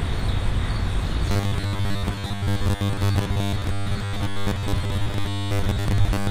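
From 1.26 s to 6.30 s the sound turns into a rigid, metallic buzz locked at 100 Hz, a robotic sound from repeated short buffers. New audio likely arrived too seldom, so about 10 ms chunks were replayed for roughly 70 percent of the time, skipping the real audio.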